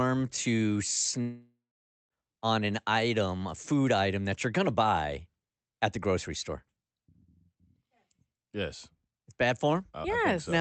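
A long network dropout runs from 1.21 to 2.13 s. The speech breaks off and is carried on as a buzzy, hiss-like continuation of the last sound that fades away, leaving about half a second of silence before the speech returns with roughly 0.9 s simply gone. The likely cause is audio that never arrived, with the receiver concealing the gap. Through the call path, the audio tops out near 8 kHz, which fits an Opus codec.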